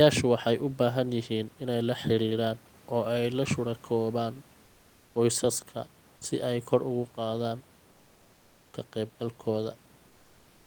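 A speech clip with comfort noise in place of the background, twice. From 4.65 to 5.15 s, between "oo ay la shuraakoobaan" and "qoysaska si ay kor", the room's natural background noise gives way to a flat, featureless noise about 2 dB quieter. The same swap fills the final pause, 10.07 s to the end. The likely cause is discontinuous transmission, as in Opus DTX. The sender stopped sending during silence, and the receiver synthesized filler noise.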